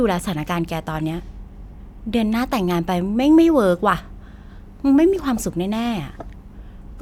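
No technical faults can be heard anywhere in this speech recording. No working signal path is described beyond the audio itself, so there is nothing further to remark on.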